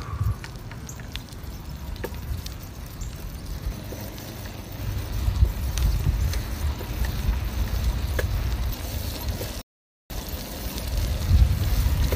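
At 9.62 s the sound drops abruptly into silence, holds there for just under half a second, and picks up again at 10.10 s exactly where it broke off, with nothing skipped or repeated. This is a rebuffering stall: playback consumed everything that had been downloaded, so the player paused and waited for more data before continuing. No audio is lost; the gap simply inserts about 0.49 s of dead air into the timeline.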